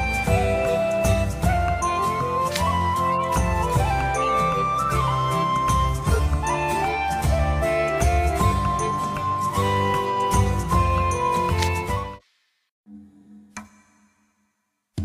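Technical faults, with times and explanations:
3.11–3.27 s, 4.22–4.29 s, 6.02–6.20 s, 9.44–9.46 s, 10.96–10.99 s, 12.15–12.25 s: corrupt frame decoded. Bit errors in a few compressed frames were decoded anyway, spraying energy into the wrong bands as short chirps and noise bursts. The strongest, near 6.0 s, peaks around -10 dBFS. The faintest, near 12.2 s, is around -35 dBFS. A spectrogram shows frame-width smears across unrelated frequencies, and the waveform shows brief spiky blocks.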